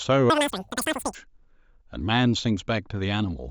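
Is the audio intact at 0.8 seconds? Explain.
No, at 0.8 s you're inside a wrong sample rate stretch running from 0.3 to 1.15 s. The speech is played far too fast without conversion, about 2.76 times speed and roughly 17.6 semitones higher. That fits 16 kHz audio played back at 44.1 kHz, so it sounds squeaky and rushed.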